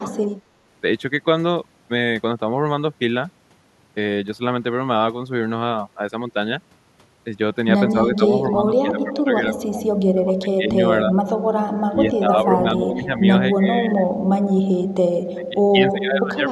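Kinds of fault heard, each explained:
Speech suppressed in double talk: the speech repeatedly dips or cuts out in pieces, most deeply by roughly 25 dB, from 7.93 s onward and again at the very end, likely the echo canceller turning everything down when both sides talked at once.
Echo leak: a brief, quiet scrap of delayed sound, around 290 ms behind and roughly 15 dB down, pops up at 13.62 s, likely loudspeaker pickup that the echo canceller didn't fully remove and sent back.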